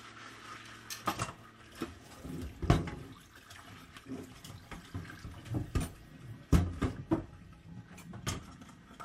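The clip is a recording of sounds, and nothing is technically wrong with it.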